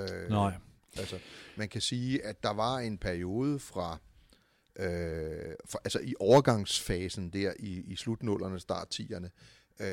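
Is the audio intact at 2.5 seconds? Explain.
Yes, at 2.5 seconds the speech plays through cleanly with no fault to be heard at that moment.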